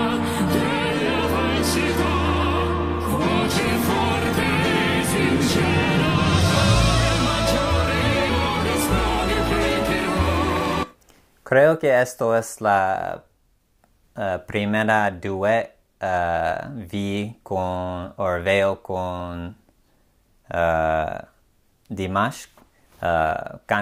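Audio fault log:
8.29–8.31 s, skip ahead: Playback jumps forward with no gap at all. Roughly 0.4 seconds of sound is simply missing. The audio before and after the jump is butted directly together, so the flow breaks abruptly. This happens when a stretch of audio is discarded, either lost in transit or thrown out by an overfull jitter buffer, while later audio is already queued. Nothing fills the hole, and the delay drops by about the same amount.
8.49–9.98 s, jitter buffer speed-up: Straight after the skip, the sound runs about 4 percent fast for roughly one and a half seconds. Pitch stays the same. The receiver's buffer was still holding more audio than it wants. To catch up, it trimmed many tiny slices, each one or a few pitch periods long. Together those cuts remove about 70 milliseconds.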